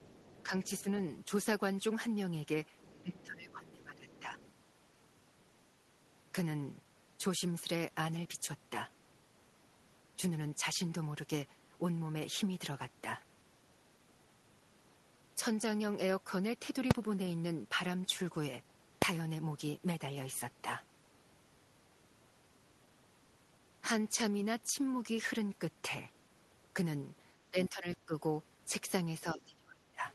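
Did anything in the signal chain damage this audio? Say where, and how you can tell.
Yes. Other side's voice leaking through at 0.0–1.0 s, 2.8–3.02 s and 4.09–4.53 s: a faint second voice, about 25 dB down, likely from incomplete echo cancellation in call processing.

Speech suppressed in double talk at 0.49–0.85 s, 3.02–4.36 s, 27.51–28.14 s and 29.23–30.06 s: the talker dips by up to about 25 dB, likely because the echo canceller ducked both voices.

Invalid numbers at full scale at 16.91 s and 19.02 s: single loud bangs where processing produced invalid values clamped to full scale, fitting 128-sample and 32-sample blocks.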